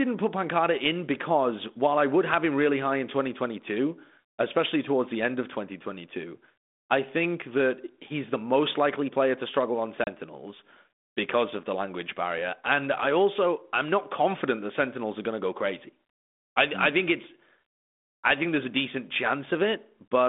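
At 10.04 s, just after "player to struggle on", there is packet loss on an ADPCM call: about 30 ms of audio, a few packets' worth, drops out as a hard-edged silent gap running to 10.08 s. Because the 32 kbit/s G.726 ADPCM decoder tracks the sender through an adaptive predictor and step size, the missing data leaves it out of step. The speech comes back with some distortion before the decoder settles.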